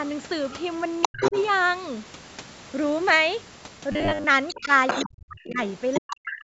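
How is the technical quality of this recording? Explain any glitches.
The recording has three kinds of fault, clustered around the first second and from about 3.9 s to the end: the far end's voice leaking into the call, the talker being ducked during double talk, and one burst of robotic buzz.

Other side's voice leaking through, at 1.02 to 1.43 s, 4.48 to 5.09 s and 5.93 to 6.01 s. The likely cause is an echo canceller that failed to strip the loudspeaker's output from the microphone signal, so the far talker comes back through. In the first stretch that second voice is about as loud as the main talker. In the second it is a little quieter, and in the brief third scrap it is clearly quieter.

Speech suppressed in double talk, at 1.08 to 1.34 s, 4.63 to 4.70 s, 5.06 to 5.59 s, and from 5.99 s to the end of the clip. When both sides spoke together, the echo canceller most likely could not tell the near talker from the echo, so it turned everything down. 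The 4.63 s dip is slight. The other three plunge almost to silence, chopping the talker's voice for a noticeable part of each stretch, about half a second in the last two.

Robotic sound from repeated short buffers, at 3.92 to 4.25 s. Audio likely arrived too slowly, and the software filled the gaps by looping the last few milliseconds instead of playing fresh sound. For most of that third of a second the voice becomes a rigid, metallic buzz at 100 Hz, which fits a loop of about 10 ms. The voice still loosely tracks the speech underneath.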